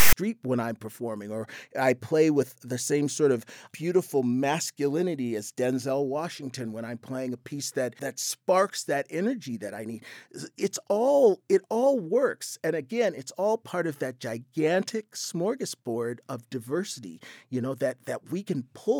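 A speech clip that opens with a harsh, loud rasp from 0 to 0.13 s, starting and stopping abruptly, before "when I'm performing or". This is file tags played as audio: text metadata at the start of the file was decoded as samples, giving a lopsided, offset burst of noise.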